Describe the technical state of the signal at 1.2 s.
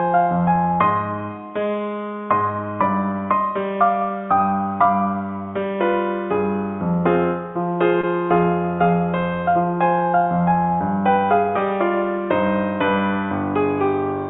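At 1.2 s the signal is intact, with no audible fault at that moment.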